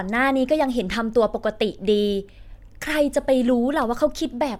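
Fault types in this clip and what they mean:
No technical faults can be heard in the speech recording; the signal holds steady throughout, with no dropouts, clicks, distortion or level jumps.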